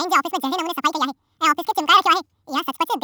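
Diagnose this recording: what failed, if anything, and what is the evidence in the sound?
The speech runs at double speed from start to finish, with every voice raised a full octave, 12 semitones, giving a chipmunk-like, hurried delivery. Pitch and tempo are shifted by exactly the same factor of 2.0, which identifies a wrong sample rate at the playback stage. The samples were clocked out at twice the rate they were captured at, with no resampling, which fits audio recorded near 22 kHz being played at 44.1 kHz.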